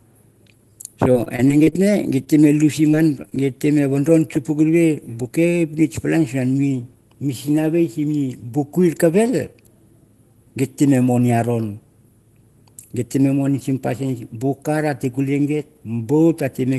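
At 0.57 s a packet arrived late and the jitter buffer ran dry, so the receiver stretched the last bit of sound for about 16 ms until the data turned up, then carried on from the same point. That is a short stall from a late packet. Almost nothing is lost, but through 0.71 s the sound is held a touch too long, with a faint buzzy sustain and about 11 ms of extra time added.

From 1.12 to 1.85 s packets went missing again and again, eight separate gaps with the longest 25 ms, together about 140 ms of real audio gone. Each hole was patched by extending the preceding sound, and about 23% of that stretch is concealment. The result is repeated packet loss with its robotic sound: choppy and broken up, with pieces missing.

At 2.24 s a single short concealed packet loss of about 20 ms occurs. The decoder bridged it by continuing the last sound and blending back in, leaving a brief smear or wobble that ends by 2.28 s.

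From 2.92 to 3.46 s the repeated loss returns more lightly: four gaps, none longer than 20 ms, about 40 ms missing, with concealment covering about 11% of the span. The choppiness is milder. All of this sits on the Opus call path, whose top end stops at about 12 kHz.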